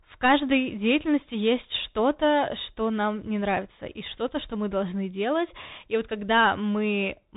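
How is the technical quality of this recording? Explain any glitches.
The quality is poor throughout, shaped by a narrowband Bluetooth CVSD headset codec. Nothing above 3.8 kHz survives, so the speech sounds muffled and boxed. The coder sends one up-or-down bit per sample, which fits a 64 kbps link. Its adaptive step lags on loud, bright sounds. S sounds turn scratchy, and a granular hiss sits underneath.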